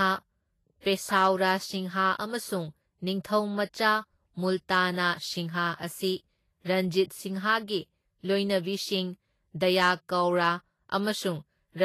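A speech clip, and it carries three faults. A transform codec working at low quality, likely Vorbis at a bitrate that sounds close to 30 kbps, has coarsely quantised the treble throughout. Nothing comes through above 14.2 kHz, and plainly audible Vorbis compression damage turns fine high detail into a hissy, grainy layer, roughening tones and blurring attacks. At 0.80 to 0.85 s, pre-echo shows where that codec spread quantisation noise across a block ahead of a sharp attack. About 48 ms of hiss runs before the onset, which sounds smeared rather than crisp. From 9.80 to 9.91 s, the signal was driven about 4 dB past what a stage could pass. This hard clipping flattened the peaks into added high harmonics, heard as crackle or fuzz on the loud sound there.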